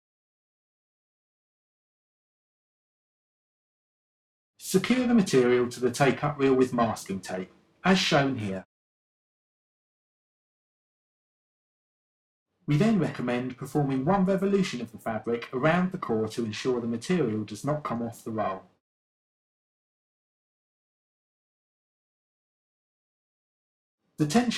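The sound carries periodic clock jitter throughout. A clock wobbling at around 1 kHz puts sidebands about 1 kHz either side of every component, giving a metallic roughness strongest on high content. Unlike a steady interfering tone, it disappears entirely in silent passages.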